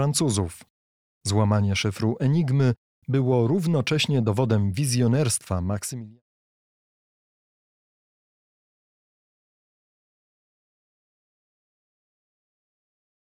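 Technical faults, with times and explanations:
No technical faults heard.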